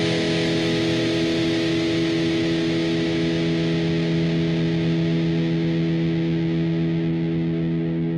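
A call bitrate drop affects this recording of everyday sounds between 0.46 and 4.11 s. The call's bandwidth estimate fell and the encoder was forced onto a much smaller bit budget, which fits a cut from around 64 kbps to about 28 kbps, held at its lowest for 2.58 s. With fewer bits per frame the codec quantises the sound more coarsely, so the sound turns rough and watery until the rate climbs back.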